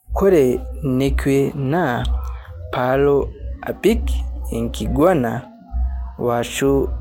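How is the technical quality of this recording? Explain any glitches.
No glitches can be heard in this speech recording. There is nothing in it that calls for an explanation.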